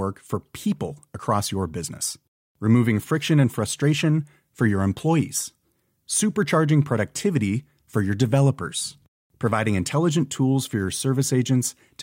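A speech recording with nothing technically wrong to point to at any time.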